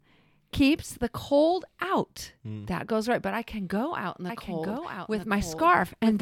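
Speech, with a doubled audio track from 4.29 s to the end: a second full-band copy of the speech enters abruptly, trailing about a second behind and only a few dB quieter. This is most likely a second capture through a slower path or an edit leaving two copies out of step. Unlike an echo or reverb, it has no decay tail and no room colouring, and it is a single clean copy rather than a series of fading repeats.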